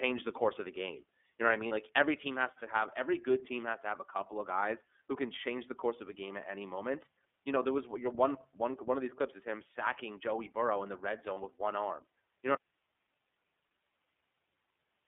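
iLBC codec, throughout the whole clip: the speech is confined to a telephone band of roughly 250 Hz to 3.5 kHz, with nothing above that surviving, and it has a plainly audible rough, synthetic edge. The 30 ms framing fits iLBC's 13.33 kbps mode. In this mode each frame's excitation is coded on its own rather than predicted from the previous one. That keeps the decoder robust to losses, but it costs naturalness on every syllable.

Lost iLBC frames, at 1.68 s and again at 11.34 s: each gap lasts 30 ms, which fits a single missing frame. The decoder filled the hole by repeating the last pitch cycle blended with noise. Each one is heard as a very brief held, slightly buzzy vowel sound where the speech should have moved on. Because iLBC frames stand independently, the voice snaps back to normal immediately after each glitch, with no lingering smear.

Audio dropout to a faint residue, from 12.55 s to the end: the speech cuts out abruptly mid-flow, not as a fade or a natural pause. 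Only low hiss remains, sitting around 45 dB below the level of the speech. The likely cause is the wanted signal being lost upstream while the path after the break stayed live, so its own noise floor carries on through to the end of the clip.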